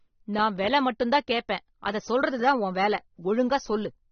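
Throughout the speech, the encoder has likely starved the signal of bits under AAC compression, with the sound pointing to AAC-LC at a rate in the high twenties of kbps. To fit that budget it discards everything above 6.3 kHz and quantises the remaining frequency lines coarsely. The voice comes out dull and muffled, with sibilants blunted, and the codec damage is plainly audible as a smeared, warbling texture over the whole recording.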